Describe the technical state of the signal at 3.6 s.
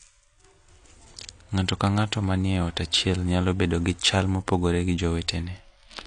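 At 3.6 s the speech carries AAC compression, present across the whole clip, with nothing above 10 kHz. The likely cause is a low-bitrate AAC-LC encode, around 32 kbps, whose coarse quantisation leaves spectral holes, giving a dull, smeared, warbling sibilance that a plain low-pass filter would not add.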